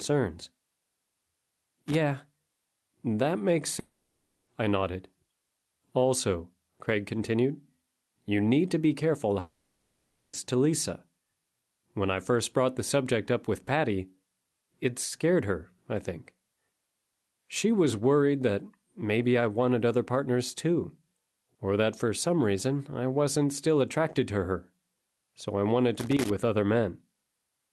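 A worn or dirty contact making and breaking produces loose connector crackle from 1.5 to 1.95 s, chopping the signal into an irregular scratchy burst. It returns from 25.99 to 26.30 s, right after "so I wanted". From 3.79 to 4.49 s, after "that makes", the sound turns into a smeared buzzy fill lasting about 680 ms before "I nodded" resumes with the gap's content gone. The same happens from 9.39 to 10.35 s after "need to be careful", where the fill runs about 940 ms. This is likely a long network dropout, with the receiver papering over audio that never arrived.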